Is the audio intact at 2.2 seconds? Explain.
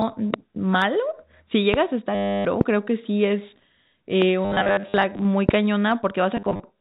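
No. From 2.15 to 2.45 s, about 300 ms, packet loss with the last packet repeated replaces the audio. The receiver keeps replaying one short packet, giving a robotic buzz near 100 Hz, which fits 10 ms packets. On a spectrogram this shows as evenly spaced vertical click lines with a frozen harmonic pattern. In the waveform, one short packet repeats identically across the gap.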